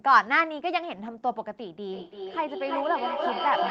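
From 1.9 s to the end, feedback echo between two devices: each word returns roughly every third of a second, peaking near speech level, about -1 dB.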